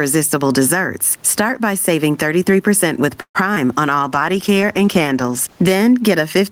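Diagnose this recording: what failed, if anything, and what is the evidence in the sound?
Gain pumping runs through the whole clip and sits at the input stage, likely an analogue preamp gain set far too high, with a fast limiter in call processing pulling it back. The room noise, about 43 dB below the speech, swells in every pause and ducks under each loud syllable, a swing of around 10 dB. On a waveform the peaks look flattened to one height. On a spectrogram the noise floor brightens between syllables and darkens under them.

A call audio freeze at the network and jitter-buffer stage runs from 3.21 to 3.37 s. The receiver's buffer likely ran dry while packets were held up. It stretched the last sound into a fading buzz or hiss for the first part of the gap, then gave 80 ms of silence. On the waveform this shows as a decaying tail followed by a flat line. Nothing is lost, because playback resumes exactly where it stopped, but everything after it now plays 133 ms later.

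Short concealed packet loss occurs between 3.55 and 3.58 s, also a network fault, handled by the decoder. About 20 ms of audio never arrived, which fits a single lost packet. The decoder patched the hole by continuing the preceding sound for about 13 ms and then blending back into the real signal. It is heard as a brief smear or wobble. A spectrogram shows a short smeared band where the harmonics briefly lose their detail.

A call bitrate drop runs from 3.99 to 5.81 s and originates at the codec, driven by the network's bandwidth estimate. The encoder was cut from 32 to 14 kbps and stayed at the lower rate for about 1.7 s. The sound turns coarse, watery or muffled there. On a spectrogram the upper frequencies vanish abruptly across that stretch, leaving a hard horizontal edge, and the remaining harmonics look blurred and blocky. The full band returns once the rate recovers.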